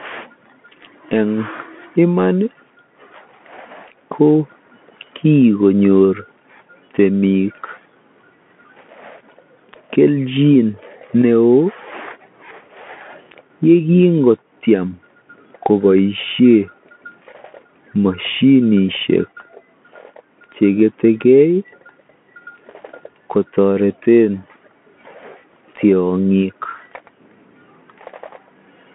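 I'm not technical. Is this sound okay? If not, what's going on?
No. Throughout the speech it sounds thin and muffled, like a phone call, with scratchy s sounds and a grainy hiss underneath. This is the Bluetooth CVSD headset codec, which drops everything above about 3.7 kHz and roughly tracks the sound in tiny up-or-down steps.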